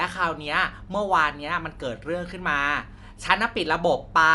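Dolby Digital compression damage runs throughout the speech. Nothing reaches above 11.5 kHz, so it sounds dull, with a rough, fluttering noise around tonal parts. The likely cause is a starved encoder, fitting a 64 kbps stream, that narrowed the band and left gaps filled with dither noise.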